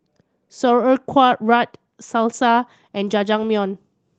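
No faults on this speech clip; the Opus voice coding, which sounds like a hybrid fullband stream at around 24 kbps, leaves only light coding effects.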